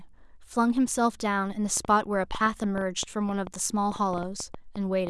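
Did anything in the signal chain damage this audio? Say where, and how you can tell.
Yes. A train of clicks, likely from electrical interference on the analogue wiring, injects about 20 similar pulses from 1.77 s to 5.08 s at an uneven pace of roughly 5.5 per second, peaking about 10 dB above the speech and ticking through the pauses too.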